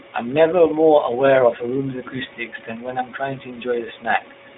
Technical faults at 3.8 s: iLBC codec

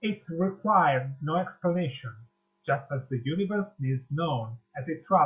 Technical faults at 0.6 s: none

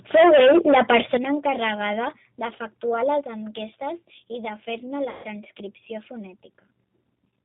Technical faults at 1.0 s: G.729 codec; microphone overload

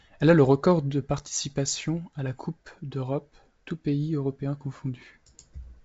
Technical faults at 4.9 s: none

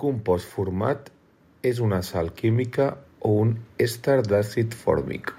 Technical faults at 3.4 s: automatic gain rising

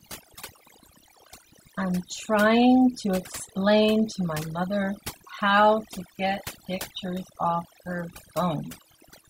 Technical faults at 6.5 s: overdone noise removal

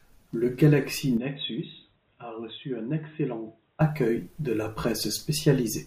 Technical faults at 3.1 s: input switched to a poorer device

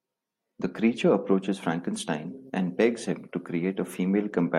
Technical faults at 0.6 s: none

